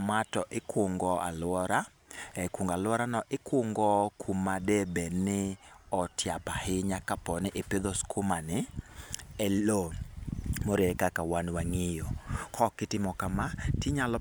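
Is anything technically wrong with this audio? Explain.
No, nothing in the signal points to a technical fault: the speech is carried without any audible defect anywhere in the clip.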